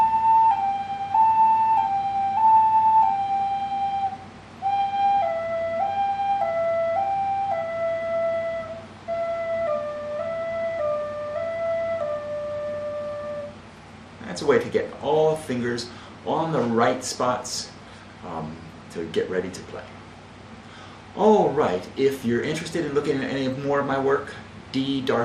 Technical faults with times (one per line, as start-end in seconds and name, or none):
0.00-25.24 MP2 compression